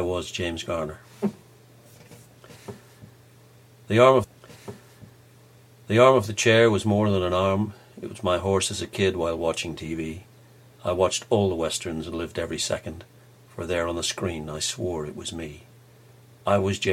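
A stream segment repeated at 4.23 s: from there to 6.23 s the audio plays a stretch it has already delivered, adding about 2.0 s to the running time, with a small blip at the point where playback jumps back. The player fetched or queued the same chunk of the stream twice, so a two-second block of the audio is heard again before the programme carries on from where the first copy ended.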